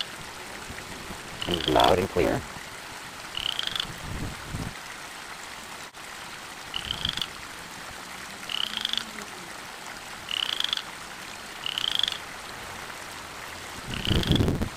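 A steady 172 Hz buzz runs through the whole clip, with the sound hurried along about 1.88 times too fast at normal pitch: a block size mismatch (truncated), consistent with 256-sample reads discarding each block's tail.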